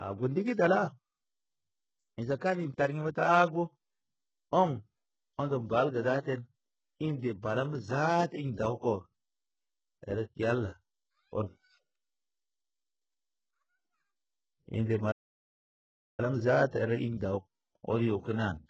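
Throughout the speech, sibilants and the upper treble sound gritty and metallic, with heavy damage. This is likely HE-AAC compression at a bitrate that sounds like about 8 kbps: the treble is rebuilt by copying lower bands upward, so its harmonics don't line up. From 15.11 to 16.20 s the audio drops to silence for about 1.07 s mid-flow, then resumes. This is a playback stall, likely the player running short of data or being blocked until it recovered.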